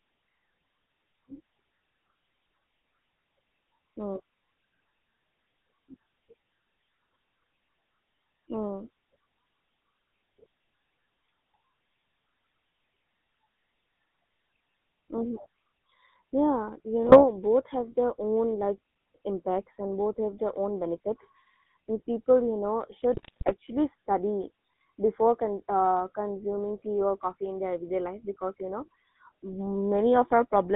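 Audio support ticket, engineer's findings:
GSM full-rate codec, whole clip: buzzy, gravelly roughness on all speech, band-limited to about 150 Hz to 3.6 kHz. Regular-pulse excitation with a thinned residual driving a vocal-tract filter. The grit follows pitch, unlike the swirly smearing of a modern low-rate codec. Fits a 13 kbps full-rate stream.

GSM bit errors, 17.03 to 17.25 s and 23.14 to 23.53 s (the second ends just before "study before"): squawks, pops and gargling bursts. Corrupted filter, pitch and gain values in the decoded frames bend the spectrum and spike the level. The speech is mangled rather than muted, which separates this from packet-loss gaps. The second burst is longer, with a higher bit error rate (2.42% vs 1.19%) and more frames hit (18 vs 7).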